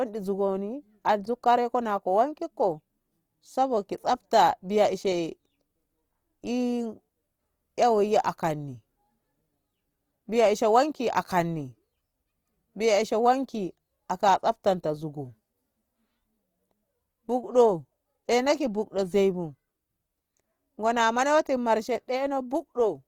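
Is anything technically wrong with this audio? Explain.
Yes, there's plainly audible codec damage running through the whole speech clip, and it sounds like Opus compression, most likely at a low music-mode setting, something around 24 kbps. The encoder keeps each band's energy but, short of bits, fills the detail with folded or noise-like content, so the speech comes out rough and grainy rather than swirly. The bandwidth stays full, with content reaching about 20.2 kHz, so nothing sounds muffled.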